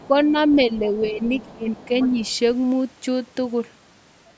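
A speech recording from a call whose echo canceller likely failed to remove the loudspeaker signal, so the other side's voice leaks through, faint at roughly 25 dB below the talker, from 0.0 to 0.87 s and 1.03 to 2.35 s. The same canceller likely mistook overlapping talk for echo, causing speech suppressed in double talk: the talker dips by about 5 dB at 0.06–0.36, 0.55–1.37 and 2.1–2.17 s, and by about 15 dB at 1.53–1.94 s. The band stops at 8 kHz, as expected from call microphone processing.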